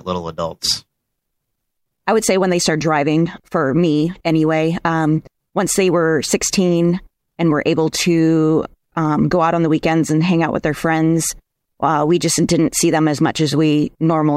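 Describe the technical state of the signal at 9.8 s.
At 9.8 s the speech signal is intact, with no audible technical fault at that moment.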